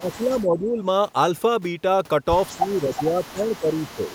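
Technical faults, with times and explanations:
0.00 to 0.83 s and 2.53 to 4.14 s, speech suppressed in double talk: the speech sags by up to about 15 dB across most of each stretch, likely because an echo canceller could not separate its own talker from the simultaneous loudspeaker echo and turned both down. Waveform envelope shrinks; spectrogram shows weakened energy.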